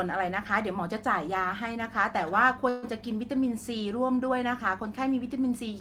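Speech clip with a call audio freeze from 2.69 to 2.85 s: packets likely arrived late and the jitter buffer ran dry, so the last sound stretches into a fading buzz before speech resumes where it stopped, nothing lost, running about 134 ms behind.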